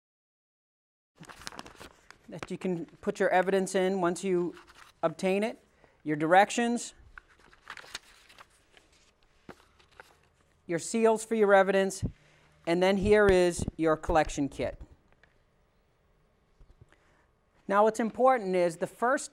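There are no technical faults to describe in time order, only a smooth fade-in at the start that is complete by about 1.2 s.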